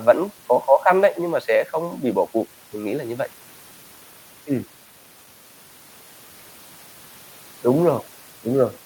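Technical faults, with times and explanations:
No technical faults can be heard in this speech clip.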